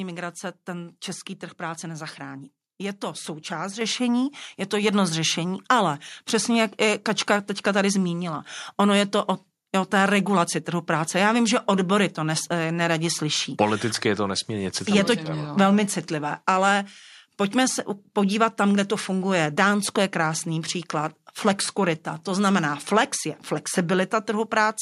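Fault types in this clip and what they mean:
Microphone volume stepped up: at 3.81 s, after "to součást", software raises the microphone's level about 6 dB at once, so speech and background jump together.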